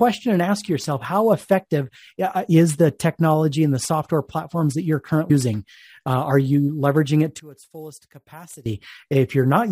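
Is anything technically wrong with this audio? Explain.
Yes, there are two faults.

At 5.27 to 5.31 s, just after "software platforms that you're", there is damaged data in a compressed stream. A short stretch of the encoded file is corrupt. The decoder cannot read those frames properly. It loses sync and hunts for the next valid frame header. The result is a brief glitch lasting about 40 ms.

From 7.40 to 8.66 s, right after "are you leveraging it", the voice suddenly drops by about 20 dB and turns faint. This is likely one channel inverted, heard on a mono sum. With one side's polarity flipped, the centred voice present in both channels cancels. Only the small difference between the channels survives. That leaves a faint remnant until normal level returns.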